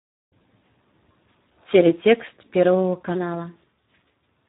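From the first moment the speech sounds hoarse, buzzy and grainy, with nothing at all above 3.8 kHz, so it is muffled as well as rough. This is Speex codec damage, and heavy. The CELP coder has too few bits to describe the excitation, so it substitutes a coarse, noisy approximation. The level of degradation fits a low setting of around 8 kbps.

At 3.15 s, and through to the end, the speech suddenly becomes hurried and higher in pitch, raised by about two semitones, with speed and pitch shifting together. This is a section at the wrong speed, running 1.12 times faster than it should. The likely cause is that this stretch was played back or edited against the wrong clock, so everything in it advances too quickly.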